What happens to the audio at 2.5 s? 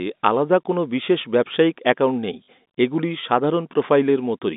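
From 2.45 to 2.48 s, just after "বিশেষ ব্যবসায়িক অ্যাকাউন্ট নেই", packet loss with last packet repeated: about 40 ms went missing and the receiver replayed the previous packet, giving a brief robotic stutter.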